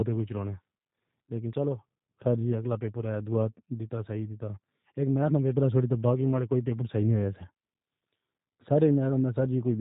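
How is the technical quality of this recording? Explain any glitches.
The whole clip carries plainly audible G.729 codec damage. Nothing gets through above about 3.8 kHz, and the speech sounds a bit rough and synthetic. That fits an 8 kbit/s G.729A stream rebuilding each short frame from a vocal-tract filter, pitch predictor and a few pulses.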